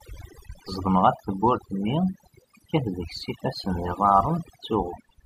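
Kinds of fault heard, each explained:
Overdone noise removal: heavy-handed noise reduction throughout the speech mutes bands near its noise estimate, leaving twinkling residue over silence, unlike steady low-pass filtering.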